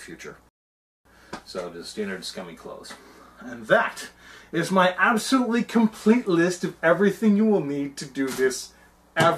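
At 0.49 s, a rebuffering stall. The player ran dry of downloaded audio and halted. Silence lasts until 1.05 s, about 0.56 s added. Playback then resumes exactly where it stopped.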